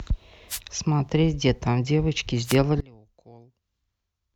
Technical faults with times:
0.49-0.60 wireless microphone noise hit
2.44-2.57 wireless microphone noise hit
2.81-4.36 one channel inverted

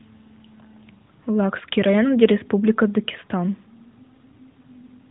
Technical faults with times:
none

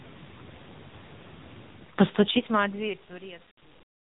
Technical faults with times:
0.00-4.04 AMR narrowband mobile codec

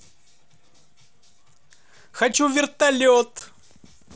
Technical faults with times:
2.33 unconcealed Bluetooth headset packet loss
3.39 unconcealed Bluetooth headset packet loss

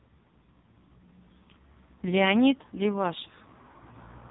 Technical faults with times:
0.00-4.31 AMR narrowband mobile codec

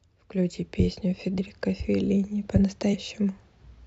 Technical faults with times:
1.37 compressed frames skipped
2.93 compressed frames skipped

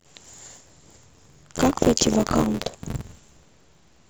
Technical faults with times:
0.00-4.10 buffer tearing

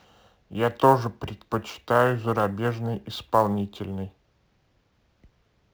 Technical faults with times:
0.00-5.73 sample clock jitter

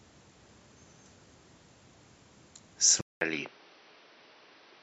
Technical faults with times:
3.01-4.82 input switched to a poorer device

